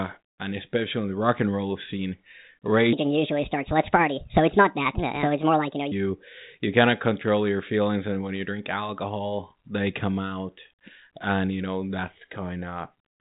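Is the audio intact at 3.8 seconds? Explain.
No. At 3.8 seconds the speech sits inside a section at the wrong speed, running from 2.93 to 5.92 s. Through that stretch it plays back 1.47 times too fast. Speed and pitch rise together, so the voice sounds hurried and lifted by about seven semitones. The likely cause is that this part was played or edited against the wrong clock. Normal speed and pitch return right after 5.92 s.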